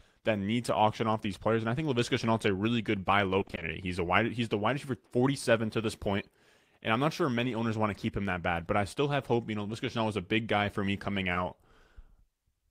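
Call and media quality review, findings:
Repeated packet loss (robotic sound), 3.39 to 3.63 s. Choppy stretch. Short holes recur across the span, each about 20 ms or less, which fits lost 20 ms packets. Receiver concealment continues the last sound. About 120 ms patched, half the span.

Short concealed packet loss, 11.33 to 11.37 s. Brief smear or wobble. About 20 ms never reached the decoder in time. Receiver concealment extended the preceding sound, then blended back into real audio. Probable component: receive-side jitter buffer and decoder concealment.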